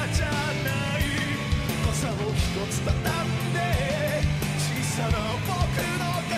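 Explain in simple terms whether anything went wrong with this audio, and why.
Nothing went wrong with this audio, because it has no sign of any technical problem.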